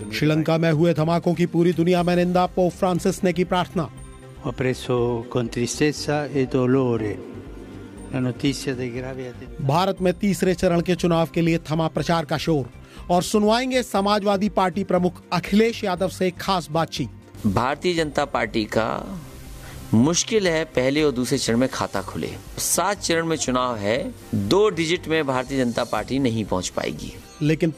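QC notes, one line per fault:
No faults found in this clip. Nothing needs a time or range.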